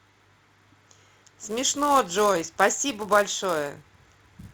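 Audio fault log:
Throughout: filter restarted on every block. A steady buzz at 375 Hz rides under the speech, which fits the filter clearing its memory every 128 samples and starting each block from silence, so every block opens with a small transient. Unlike mains hum, this buzz is not at 50 or 60 Hz. It swells with loud syllables and drops away in the pauses, because each transient scales with the signal passing through.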